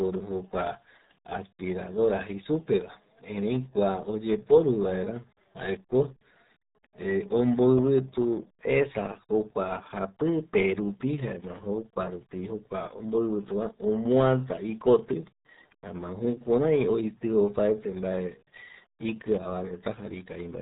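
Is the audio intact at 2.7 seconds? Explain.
No. Around 2.7 seconds, as throughout the clip, the speech sounds muffled and gargly, with nothing above 3.8 kHz. That is the RealAudio 14.4 codec squeezing it into 8 kbit/s and damaging it heavily.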